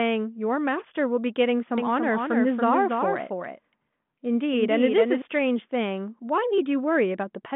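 From 1.78 s to 5.22 s the speech is a doubled audio track. A second full-band copy trails the first by roughly 300 ms, about 5 dB quieter. It carries no room colour or decay, so it sounds like a flat repeat rather than an echo. It cuts in and out abruptly at both ends. The likely cause is the same signal reaching the mix twice, once through a slower path. Both copies share the narrow telephone band.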